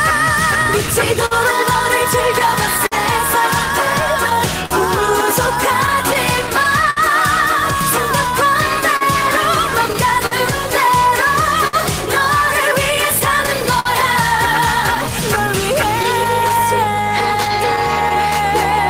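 Small timing hiccups recur unevenly from start to finish, a faint unsteadiness in the pacing rather than any single obvious break. This is clock drift between sender and receiver: the sending side's clock runs roughly 4 percent slow relative to the receiver's, so the jitter buffer keeps running low and the receiver has to pad or stretch the stream again and again to avoid running dry.

From 0.63 s to 6.99 s there are scattered short gaps, about fifteen brief ticks and smears where the sound seems to hold or blur for an instant, the longest around 70 ms and together amounting to roughly a third of a second. Packets in this stretch arrived late or not at all, and each small hole was bridged by extending the last bit of sound, which keeps the audio continuous but leaves those momentary smears.

Between 4.33 s and 18.49 s the tempo wobbles slightly, with tiny stutters where a fragment seems to repeat. 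These are repeated timing corrections: to keep pace with the slower sender, the receiver inserts short copied pieces at irregular spacing, always lengthening the stream, adding up to around 70 ms in all.

A second run of scattered short gaps spans 8.82 s to 18.33 s, with about twenty brief hiccups, none longer than about 50 ms, again patched by continuing the preceding sound.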